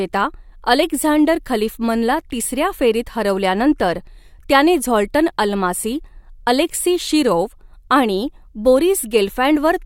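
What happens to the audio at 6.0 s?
Nothing goes wrong at 6.0 s; the speech plays through that moment intact, with no dropout, click, distortion or level change.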